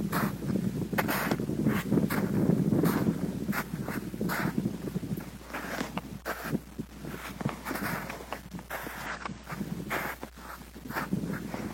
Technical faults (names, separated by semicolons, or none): damaged data in a compressed stream